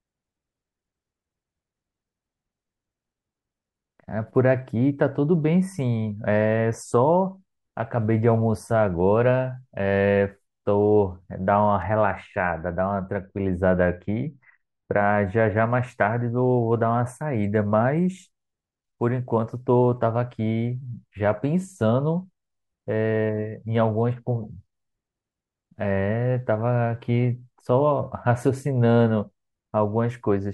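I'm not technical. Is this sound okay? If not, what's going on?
No. From about 11.8 to 15.6 seconds, the speech turns dull and muffled, as if heard through a thick curtain. This is de-emphasis applied wrongly. Some systems deliberately cut the treble to undo an earlier boost. Here that cut was applied to audio that never had the boost, or it was applied twice. So the crisp, high parts of the sound are strongly reduced during that stretch.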